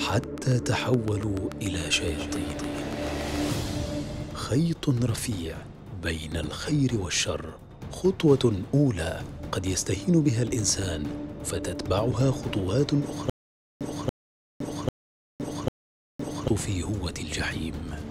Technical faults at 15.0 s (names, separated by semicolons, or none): stutter with silent gaps